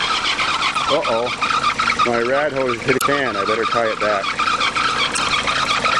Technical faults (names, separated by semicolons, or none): damaged data in a compressed stream